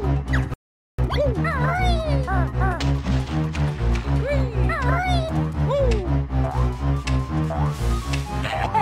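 At 0.54 s the audio cuts out abruptly and stays silent until 0.99 s, a gap of about 0.45 s. This is a playback stall: the likely cause is that the player's buffer ran dry or its output thread was held up, so nothing reached the output. On a waveform the trace drops to a flat line for that stretch, and a spectrogram shows a clean vertical band of empty space with hard edges.

From 0.99 s to 1.43 s the sound resumes at double speed. This is time-compressed catch-up: to work off the backlog left by the stall, the player discards short slices and cross-fades the remainder, so the audio is rushed at 2.0x while its pitch stays put. A spectrogram shows harmonics at their usual heights but events packed tightly in time, and the waveform has dense, slightly choppy envelopes.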